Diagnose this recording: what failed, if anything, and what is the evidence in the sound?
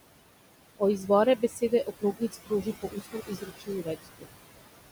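The failure is in call processing, where a noise suppressor is attenuating bands it classifies as steady noise, frame by frame, by about 20 dB. The room noise sits about 11 dB below the speech and is pumped by this gain: it sinks in the gaps and rises under each phrase. On a spectrogram the background floor appears as dark holes between utterances and lighter patches wherever speech is present, which is the signature of noise suppressor artifacts.

Between 1.37 and 4.27 s the suppressor also misjudges parts of the speech itself as noise. This is speech cut by the noise suppressor, adding up to about a second and a half across that span. Those segments are pulled down with the background, by about 21 dB at the deepest, so they sound swallowed or faint. In the waveform the envelope shows abrupt notches within speech. On the spectrogram the affected stretches lose their low-level energy and fade almost to the suppressed floor.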